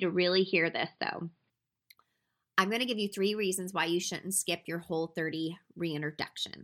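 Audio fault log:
0.0–1.5 s, input switched to a poorer device: dull speech with nothing above 5 kHz, level a few dB different, faint added noise; likely a narrowband input, switched without a gap.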